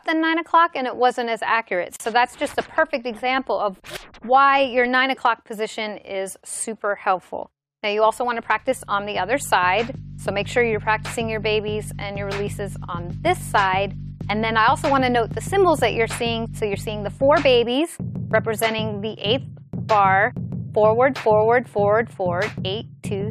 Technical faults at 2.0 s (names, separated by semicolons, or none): gap at a join of encoded pieces